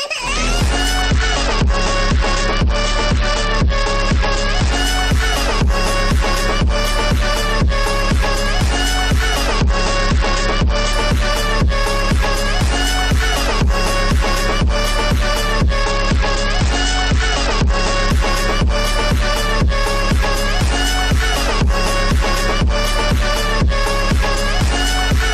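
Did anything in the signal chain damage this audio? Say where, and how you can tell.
Yes. A Bluetooth SBC bit pool drop occurs at 1.02–4.77 s, 9.56–10.93 s and 15.83–18.10 s, where treble dulls and gritty noise rises. At the codec stage, a congested link forced fewer bits per frame, consistent with bit pool 31 falling to 10, starving the upper sub-bands.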